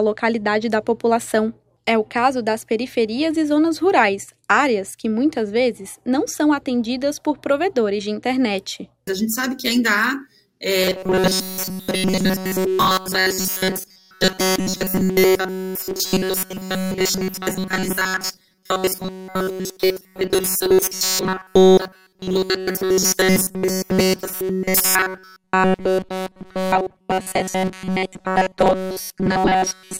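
From 10.81 s to the end of the clip, fresh audio likely stops reaching the output often enough, so the playback side keeps looping its last short buffer instead of waiting, and essentially all the incoming material is skipped. The result is robotic sound from repeated short buffers: each loop lasts about 5.3 ms, so the repetition stamps a fixed 188 Hz buzz onto everything, leaving a rigid, metallic drone that only loosely tracks the original sound.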